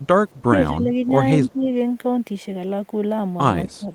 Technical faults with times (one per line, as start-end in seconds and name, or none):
0.01-0.07 echo leak
0.46-0.90 speech suppressed in double talk
1.40-1.68 speech suppressed in double talk
3.64-3.91 speech suppressed in double talk
3.69-3.77 echo leak